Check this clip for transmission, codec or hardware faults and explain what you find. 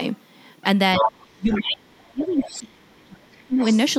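The speech has two related echo-control faults, both from the talker and the far end speaking at once.

Speech suppressed in double talk occurs from 0.96 to 1.12 s as a shallow dip of roughly 10 dB, then from 1.35 to 3.61 s as a much deeper cut, to about 35 dB down, across roughly two seconds. The talker's level collapses while the other side is active. The likely cause is an echo canceller that could not separate the near voice from loudspeaker echo and attenuated both. Unlike a network dropout, the loss follows the overlap with the other voice rather than arriving as abrupt gaps.

The other side's voice leaking through appears from 0.96 to 1.28 s at about the same level as the talker. Fainter scraps follow at 1.52 to 1.60 s, about 10 dB down, and at 2.41 to 2.58 s and 3.61 to 3.78 s, both about 20 dB down. The likely cause is far-end audio picked up from the loudspeaker and not fully cancelled. 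What separates this from crosstalk or a second person in the room is that it comes and goes in short fragments timed around the suppression.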